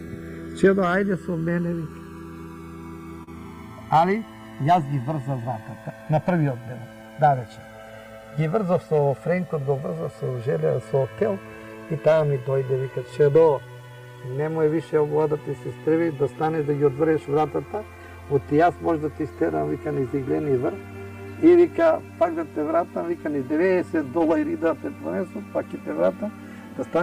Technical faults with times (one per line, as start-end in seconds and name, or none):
0.00-27.02 channels drifting apart
3.23-3.29 short concealed packet loss